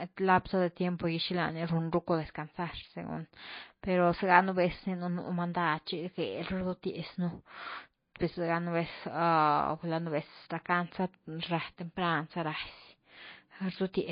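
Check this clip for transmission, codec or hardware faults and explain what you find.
One codec fault runs through the whole clip. Nothing is heard above 5.1 kHz, and the speech has a plainly audible watery, swirling texture. This is likely MP3 compression at a bitrate that fits about 24 kbps. Short of bits, the encoder cuts the treble at a fixed point. It also drops weak frequency lines, which flicker on and off between frames. That flicker makes the swirl, and s sounds turn metallic.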